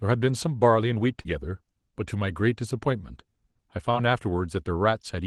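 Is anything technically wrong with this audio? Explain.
Yes, there are two short concealed packet losses in this speech, at 1.21–1.27 s and 3.91–3.95 s. Roughly 40 ms and 20 ms of audio arrived too late, so the decoder extrapolated the preceding sound to bridge each gap and cross-faded back. Each one is heard as a brief smeared wobble. On a spectrogram, harmonics stretch flat and slightly blurred across each gap. The waveform shows a repeated, smoothly decaying cycle. Codec band-limiting near 12 kHz is also visible.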